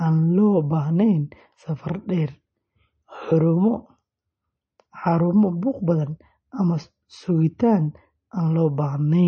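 From start to finish the speech carries audible MP3 compression damage, likely from encoding at a low bitrate around 32 kbps: nothing reaches above 8.4 kHz, so s sounds turn dull and watery. On a spectrogram, a hard ceiling appears with flickering, patchy holes below it.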